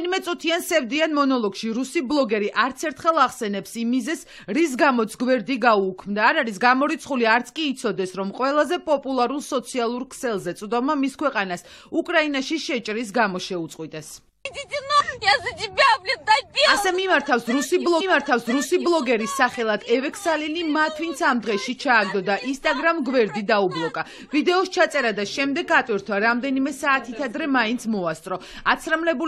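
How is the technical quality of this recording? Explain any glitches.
One glitch stands out. A stream segment repeated from 18.00 s to 19.00 s: the player fetched or queued the same chunk twice, so the audio jumps back and replays 1.0 s of material, with a small blip at the jump. This adds a second to the recording's running time.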